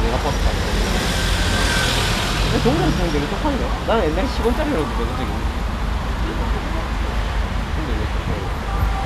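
Nothing technically wrong turns up anywhere in this recording of sounds, so there's no fault to point to and no cause to chase.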